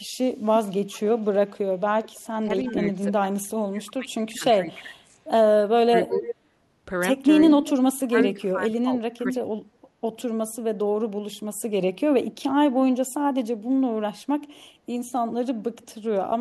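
From 0.5 to 2.73 s there's an echo leak: a faint copy of the speech, about 25 dB down, trailing by 340 ms. The far end's echo canceller is likely letting its loudspeaker bleed back into its mic. The same delayed copy returns at 4.35–4.39, 6.14–6.35 (about 10 dB down), 7.45–8.28 (only about 5 dB down), 9.32–9.36 (about 10 dB) and 15.82–15.86 (about 40 dB, barely there).

Overlapping that, 2.44–6.28 s shows speech suppressed in double talk. With both sides talking, the canceller likely can't tell the talker from echo, so it ducks the speech in patches totalling around two seconds, sometimes by about 25 dB. It happens again at 8.01–9.28, with roughly 0.7 s ducked by up to about 20 dB.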